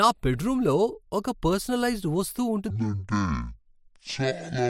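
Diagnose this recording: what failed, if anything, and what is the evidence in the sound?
Speech runs normally until 2.70 s, then the rest of the clip drops into a section at the wrong speed. From there to the end at 4.70 s it plays at 0.515 times real speed, so everything slows to roughly half pace and the pitch sinks by about ten semitones, giving that deep, dragging sound. Because speed and pitch fall together, the likely cause is a clock or sample-rate mismatch at the editing or playback stage.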